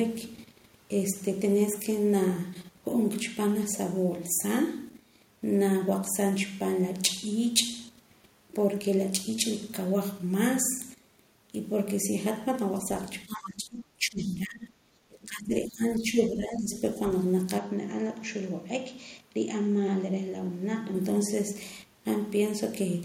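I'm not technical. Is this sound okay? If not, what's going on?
No, there are three problems in the middle of this speech clip.

From 13.26 to 15.83 s, and again from 16.0 to 16.73 s, the voice drops down. That's speech suppressed in double talk, likely the echo canceller turning down everything while both people talked at once. The first stretch is the heavier one.

Around 15.95 to 16.02 s there's a very brief, faint scrap of a second voice. That's the other side's voice leaking through, likely their sound coming out of the talker's loudspeaker and not being fully removed from the microphone.

From 17.58 to about 20.95 s the sound turns duller and a little quieter, and it happens without any gap. That's the input switched to a poorer device, likely a change to a different microphone or headset mode partway through.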